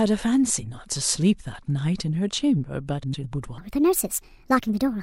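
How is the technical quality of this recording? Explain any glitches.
The recording has two glitches, both in the last couple of seconds of this speech clip.

From 3.03 to 3.24 s there's frames out of order: two neighbouring runs of about 105 ms each, which fits four frames apiece, got decoded swapped. You hear a garbled flutter, but nothing goes missing.

Then from 3.58 s to the end, there's a section at the wrong speed. It plays 1.41 times too fast, so pitch jumps by roughly seven semitones and the speech turns high and hurried. That's likely from being played against the wrong clock.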